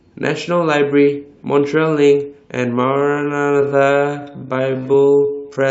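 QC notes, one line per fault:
2.71–5.71 s: time-stretched section, speech abruptly slows to about 0.55x pace with pitch held, sounding dragged, likely from software stretching to fit length.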